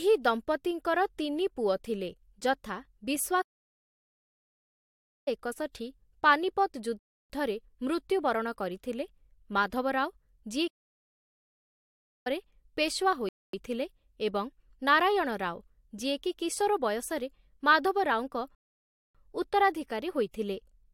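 The speech cuts out mid-flow at 3.41 s for about 1.85 s and again at 10.67 s for about 1.58 s: a playback stall, likely the player starving for data or its thread blocking. Shorter rebuffering stalls drop to silence at 6.99 s (0.31 s), 13.29 s (0.25 s) and 18.55 s (0.6 s), then resume exactly where they stopped. The player waited for more downloaded audio, adding time without losing any.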